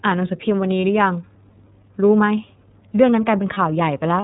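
Speech sounds muffled and slightly rough and synthetic throughout, with nothing above 4 kHz. That is the iLBC codec, whose 30 ms frames fit its 13.33 kbps mode. At 0.81 s and 3.53 s, a brief, slightly buzzy held sound replaces the speech for about 30 ms, and then it recovers immediately. These are lost iLBC frames, each pointing to a single missing packet that the decoder covered by repeating the last pitch cycle mixed with noise.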